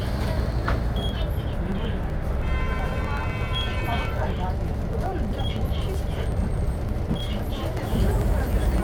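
From 0.08 to 8.78 s, periodic USB or driver dropouts skip about a millisecond of audio every 0.063 s. This produces steady ticking whenever sound is present.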